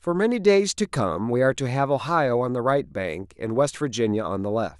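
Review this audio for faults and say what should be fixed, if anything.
No faults; nothing needs fixing.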